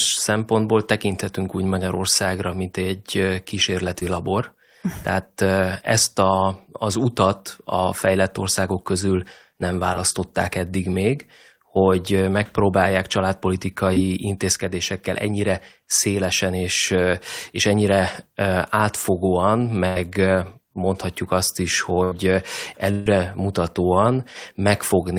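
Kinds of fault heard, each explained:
Short concealed packet loss: four tiny gaps of about 20 ms, first after "mint egy", are patched by extending the last sound, showing as brief smeared, flattened spectrogram blips.
Burst of packet loss: three longer losses of 80, 80 and 140 ms are bridged by continuing the last sound as it fades; waveforms decay, then audio resumes further on.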